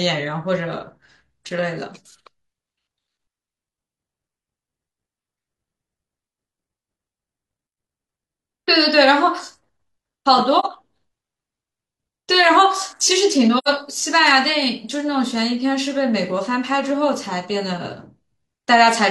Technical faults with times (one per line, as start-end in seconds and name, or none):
10.59-10.65 AAC frame loss with muting
13.57-13.68 AAC frame loss with muting